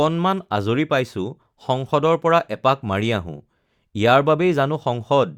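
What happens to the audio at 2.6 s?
Nothing goes wrong at 2.6 s; the speech carries on intact through that moment, with no dropout, click or distortion.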